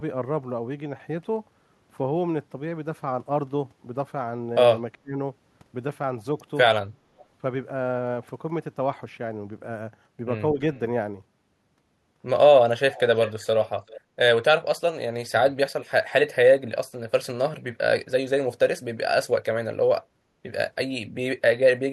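Speech with two kinds of call-processing trouble. At 4.94 to 5.18 s the talker dips by about 35 dB, and at 10.52 to 10.6 s by about 10 dB. That's speech suppressed in double talk, likely the echo canceller ducking the near talker while the far side spoke. Then there's echo leak: a faint copy of the audio trailing by 386 ms, from about 35 dB down to about 15 dB down. It shows up at 7.18, 10.74, 12.92, 13.25, 13.6 and 13.87 s, likely a loudspeaker echo the canceller didn't fully remove.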